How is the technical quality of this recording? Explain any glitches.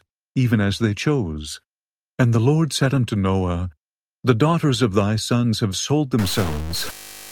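A glitch near the end of this speech recording, from 6.19 s to 7.32 s, sounds like a stuck bit, likely a data line or converter bit frozen at one value. Roughly half the samples are shifted by a fixed step of around -25 dBFS, following the waveform's shape. The speech turns harsh and buzzy, and quiet gaps fill with audible noise because the bit also flips with the sign of small values.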